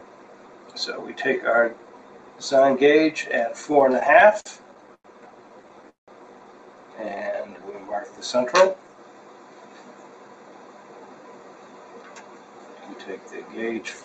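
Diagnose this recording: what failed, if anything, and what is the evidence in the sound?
Call processing failed: a speech-tuned noise suppressor stays active throughout and treats steady tones, ambience and tails as noise. Attacks pass while sustained parts sink by around 10 dB, so the sound pumps and thins. A spectrogram shows sustained partials fading between onsets.

At the network and jitter buffer, repeated stalls (stutter) occur from 3.72 to 5.05 s (15 gaps, 283 ms filled, longest 101 ms, 21% of the span) and from 5.62 to 6.09 s (5 gaps, 223 ms, longest 182 ms, 48%). The buffer emptied, and the receiver extended the last sound without losing any. The waveform shows repeated, fading segments.

A jitter buffer slow-down from 7.09 to 8.18 s stretches playback to 86% speed, adding 157 ms by repeating pitch periods or pause fragments to rebuild the reserve. The pitch stays unchanged. 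A spectrogram shows features drawn out in time with repeated cycle-length slices.

A jitter buffer speed-up from 9.95 to 12.69 s runs at 111% speed, removing about 0.3 s in short pitch-period cuts to shed excess delay. The audio sounds hurried at the same pitch. The waveform shows compressed timing and small splice discontinuities. The Opus path's 8 kHz ceiling also shows.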